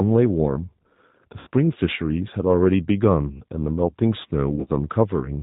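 From start to finish the speech carries the sound of the G.729 codec, in a form that fits an 8 kbit/s G.729A stream. The decoder rebuilds each 10 ms frame from a vocal-tract filter, a pitch predictor and a few fixed pulses, so the voice comes out plainly rough and slightly synthetic. On a spectrogram, energy stops sharply at 4 kHz, and the harmonics look smeared and grainy rather than clean.

At 1.39 to 1.48 s there is a burst of VoIP packet loss concealed by the speech codec, covering about 80 ms of missing audio. The decoder fills the gap by repeating its last pitch and filter at falling gain, so the speech turns into a short buzzy, fading tone. The waveform shows regular, repeated pitch cycles that shrink in amplitude, and a spectrogram shows frozen, evenly spaced harmonic stripes.

From 4.55 to 4.70 s the same concealment returns. This time about 100 ms is lost, scattered across 140 ms, and the longest unbroken gap is 40 ms. 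The sound flutters between real speech and brief, buzzy, weakened patches. On the waveform the envelope dips in several places. The spectrogram shows stretches of flat, repeated harmonics broken up by short returns of normal texture, and the speech stays weak just after each patch.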